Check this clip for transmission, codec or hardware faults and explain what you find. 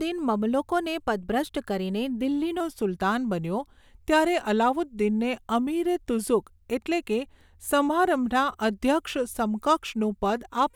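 One fault, a wrong sample rate, runs from 2.6 s to the end. Samples are clocked out slower than they were captured, which fits 48 kHz material played at 44.1 kHz, so the speech drops to 0.919 times speed and about 1.5 semitones lower, sounding slightly slower and lower.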